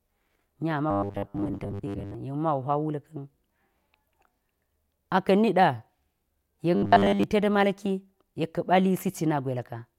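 From 0.91 to 2.15 s, and again from 6.76 to 7.24 s, the speech collapses into robotic sound from repeated short buffers: a rigid, metallic buzz at 100 Hz that only loosely tracks the words. The likely cause is the same 10 ms stretch being replayed while most incoming audio is skipped. A spectrogram would show evenly spaced horizontal lines at multiples of 100 Hz, and the waveform would show identical 10 ms cycles.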